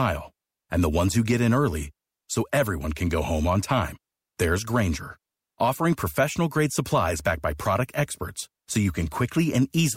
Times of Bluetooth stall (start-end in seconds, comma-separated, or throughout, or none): none